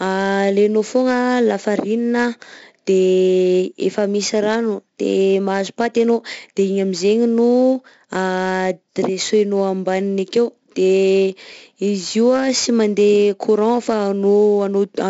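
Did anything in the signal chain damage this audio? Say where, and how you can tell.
Yes, the damage comes from the codec stage: 4-bit ADPCM compression across the whole speech clip. A gritty hiss rides on the louder passages and rises and falls with level, and plosives and other sharp onsets sound distorted where the adaptive step size can't grow fast enough. Nothing is present above 7.7 kHz, which fits a 16 kHz sample rate at 64 kbps and explains the dull top end. The damage is heavy throughout.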